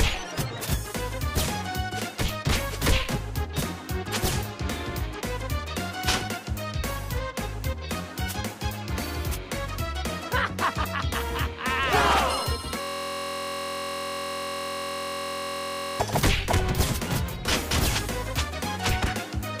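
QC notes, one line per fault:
12.82–16.00 s, system hang loop: the sound abruptly locks into a steady buzz at about 43.1 Hz, with no variation for just over three seconds. A single 23.22 ms slice of audio is repeating exactly, well over a hundred times, which fits a 1024-sample ring buffer. The computer or its audio driver stalled and stopped supplying new audio, while the sound hardware kept cycling through the last buffer it held.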